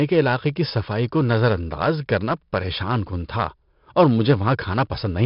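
From start to finish the speech has been through 4-bit ADPCM compression. The coder stored each sample as a coarse 4-bit step from a predicted value, so its error rides along as a gritty hiss that swells with every loud syllable, and sharp onsets break up where the step size lags behind. The damage is heavy. Nothing remains above 5.3 kHz, which fits a sample rate near 11 kHz and a rate of about 44 kbps, leaving the whole clip dull and muffled.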